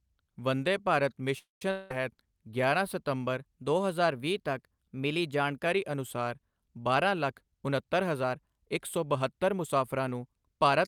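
A speech recording with four transport and clocking faults. A call audio freeze, likely caused by delayed packets emptying the jitter buffer, runs from 1.38 to 1.62 s. The last sound is stretched into a fading buzz that ends in about 160 ms of silence. When the audio resumes, nothing is lost, but everything after it now arrives about 0.23 s later. A long network dropout follows at 1.71 to 1.91 s, likely from packets that never arrived. About 190 ms of audio is gone for good, and the gap is filled entirely by a decaying concealment buzz with no silent stretch before the sound picks up further on. Between 3.39 and 5.66 s, a drift correction step, likely clock-matching software changing the playback rate at once to manage its buffer, speeds the voice up by 5.4% and raises its pitch by 91 cents, close to a semitone, before it snaps back. From 6.68 to 9.94 s, a jitter buffer speed-up trims an overfull buffer by cutting out many pitch-period slices, about a fifth of a second in total. 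Speech runs at 107% speed at unchanged pitch and sounds hurried.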